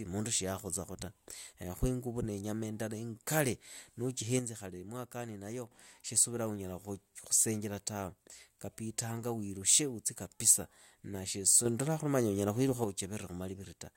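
At 4.39 s the level drops about 6 dB until 5.71 s, and at 11.66 s rises about 6 dB until 12.84 s. These are sudden gain jumps, likely unramped digital gain changes. Background noise steps with the speech, instantly rather than gradually like a fade.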